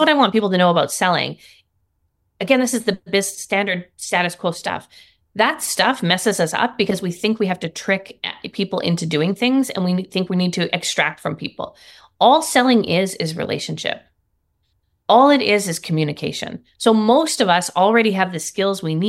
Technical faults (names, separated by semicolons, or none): none